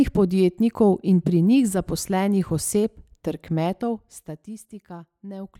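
No technical faults can be heard in this speech recording; the signal runs on with nothing that breaks or disturbs it.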